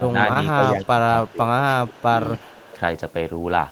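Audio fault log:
0.00–0.16, 0.55–0.89, 1.31–1.40 and 1.59–2.03 s: speech suppressed in double talk. The level dips about 10 to 15 dB, likely from the echo canceller ducking during overlap.
0.33–0.37 s: short stall from a late packet. The last sound is held for about 16 ms until data arrives. Playback resumes in place, with nothing lost.
1.25–1.32, 1.92–2.04 and 2.36–2.78 s: echo leak. A faint copy about 25 to 30 dB down trails by 282 ms, likely loudspeaker pickup the far canceller missed.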